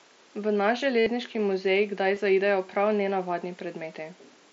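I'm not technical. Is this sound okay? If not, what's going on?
No. The clip has concealed Bluetooth headset packet loss. Bits of speech got lost between headset and phone. The phone filled each gap by repeating recent sound. From 0.99 to 1.06 s this makes a brief buzzy tone. At 2.15 s the gap is tiny and barely noticeable.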